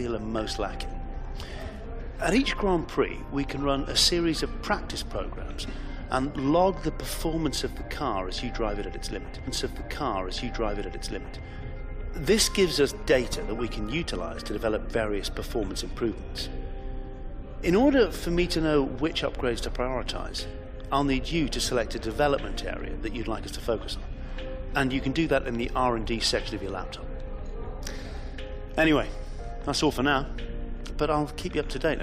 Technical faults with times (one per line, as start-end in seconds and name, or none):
9.46-11.46 stream segment repeated